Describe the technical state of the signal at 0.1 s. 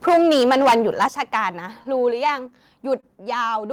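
Microphone overload runs from 0.07 to 1.06 s. The speech peaks sit about 12 dB above full scale, most likely from input gain set too high, so around a tenth of the samples have flattened tops that give a harsh, crackling edge to the loudest syllables.

A microphone volume step-down falls at 0.09 s, just inside the clipped stretch. The level of speech and background drops abruptly by about 2 dB in a single step, likely the call software reducing the device's input gain after detecting the distorted peaks.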